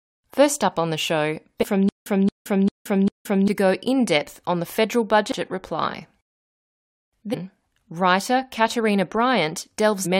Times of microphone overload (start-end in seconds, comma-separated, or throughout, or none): none